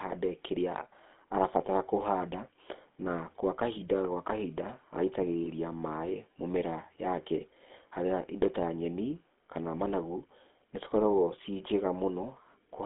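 A speech recording carried throughout by the GSM full-rate codec, heard as a steady buzzy, gravelly roughness with the band held to roughly 200 Hz to 3.5 kHz, which fits a 13 kbps full-rate coder. Unlike plain telephone band-limiting, the grain sits inside the voice itself. At 5.44 to 5.48 s, lost GSM frames cause a brief metallic ring where the coder repeats its last good settings. The gap is short enough to suggest a single missing 20 ms frame. It rings rather than clicking or dropping to silence, which separates it from a simple dropout.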